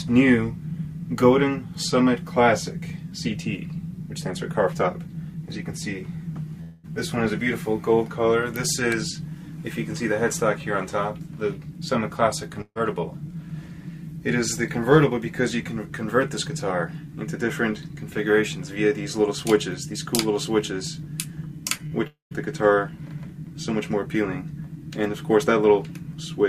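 At 6.61 to 6.86 s the sound is replaced for about 0.22 s by a continuation of whatever preceded it, which fades without reaching silence before the audio returns further along, with roughly 220 ms never heard. This is likely a long network dropout. The receiver stretched the last sound into a held buzz or hiss. On a spectrogram that stretch shows frozen, smeared bands or flat noise, ending in an abrupt change where real audio resumes.

At 12.62 to 12.77 s a burst of packet loss leaves a hole of about 140 ms. About 140 ms is filled by extending and turning down the last sound, and 40 ms of it is silent, so the sound drops away before it jumps back in with that stretch missing. The waveform shows a decaying envelope and a brief flat line. The spectrogram shows fading, static bands, then a blank strip.

Two short concealed packet losses fall at 21.77 to 21.81 s and 21.87 to 21.93 s. About 20 ms and 40 ms of audio never arrived in time, and the decoder patched each hole with a synthesized continuation, 14 ms and 41 ms long, before blending back into the real signal. 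Each one sounds like a brief smear or wobble. On a spectrogram each shows as a thin blurred sliver.

Right after these, at 22.07 to 22.33 s, the sound again gives way to a fading continuation, then 140 ms of silence, with about 240 ms lost before it resumes. This is likely another long network dropout, seen as held, dimming bands, then an empty gap in the spectrogram and a flat stretch in the waveform.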